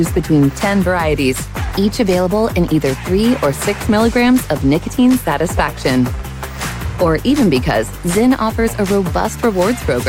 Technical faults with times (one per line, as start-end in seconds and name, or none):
none